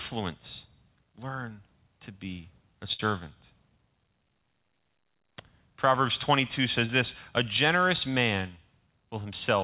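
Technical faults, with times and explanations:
2.93–3.02 s, burst of packet loss: Just after "learn to be a", about 60 ms of the call failed to arrive in time to be played. The receiver covered the hole by extending the last sound it had and turning it down as the gap went on, which is heard as a held, fading tail in place of real audio. Playback then picks up further along, so the stretch in between is simply missing rather than delayed.
6.86–6.92 s, short concealed packet loss: A shorter gap of about 30 ms never reached the decoder in time. The receiver synthesised a stand-in by continuing the preceding sound, using its pitch where there was one and shaped noise where there wasn't, then crossfaded back into the real signal. The result is a brief smear or wobble within the 4 kHz-limited G.711 call band.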